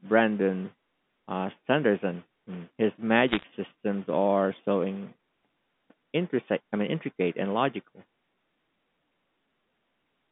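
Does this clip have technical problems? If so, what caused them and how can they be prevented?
Yes, there's a short burst of bit errors on a digital phone line, from about 3.29 to 3.44 s. A rough error rate of around one in a hundred bits flips individual samples of the G.711 signal, and hits on sign or high-order bits crack out as sharp ticks over the narrow 150 Hz to 3.6 kHz telephone sound. Preventing it comes down to a cleaner digital link, or error detection and correction on the line.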